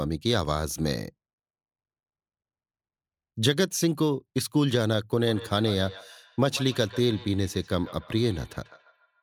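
From 5.26 s to 9.22 s there is feedback echo between two devices. A second device in the room replays the speech, and this microphone picks it up again. The repeats come back roughly every 150 ms, thin and ringing, at about 18 dB below the speech.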